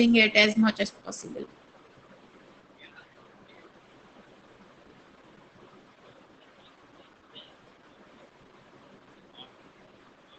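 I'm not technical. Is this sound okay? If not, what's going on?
No. Throughout, Opus voice compression makes the speech muffled, slightly hoarse and robotic; plain muffling would only dull the sound, without that rough, buzzy edge.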